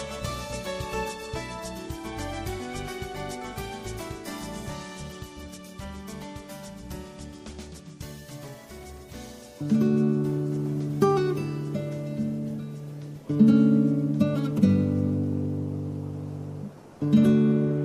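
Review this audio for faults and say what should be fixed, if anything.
Across the whole clip the sound is watery and swirly, with metallic chirping on high, noisy detail, which points to likely MP3 compression at a low rate, about 64 kbps. Unlike a plain low-pass filter, the dropped-out upper lines flicker frame to frame rather than staying steadily dull. To prevent it, keep an uncompressed master or export at a much higher bitrate.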